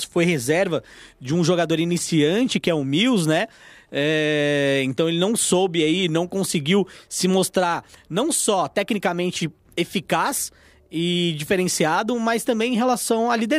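No faults turn up anywhere in the recording; nothing in it points to a dropout, a glitch or a break in the signal path.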